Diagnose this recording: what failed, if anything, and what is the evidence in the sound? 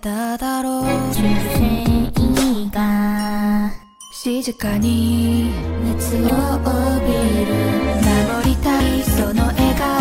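Damaged data in a compressed stream, at the codec decoding stage: short glitches at 1.11 to 1.16 s and 6.26 to 6.30 s, each about 40 ms. Corrupted bytes made the decoder misread frames and resynchronise.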